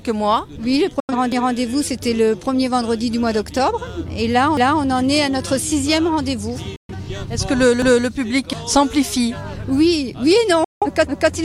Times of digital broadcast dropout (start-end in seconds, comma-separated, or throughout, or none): 1.00-1.14, 6.76-6.93, 10.64-10.87